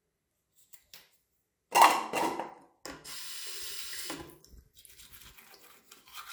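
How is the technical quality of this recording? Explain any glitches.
No audible glitches or faults.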